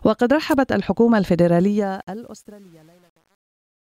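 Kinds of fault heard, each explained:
Truncation distortion on a fade: the fade-out, which begins around 1.6 s and runs to the end, loses resolution because the gain stage rounds each sample to a coarse step without dither, which fits roughly 9-bit precision. Grit appears from 1.6 s and worsens after 2.07 s. Unlike a noise gate chattering, the harshness grows steadily as the level falls.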